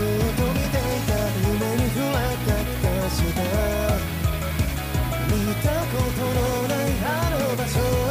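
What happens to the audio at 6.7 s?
At 6.7 s, as throughout the clip, low bit depth with noise shaping is at work: 6-bit quantization error pushed upward, heard as a thin hiss rising toward the treble, roughly 15 dB below the signal.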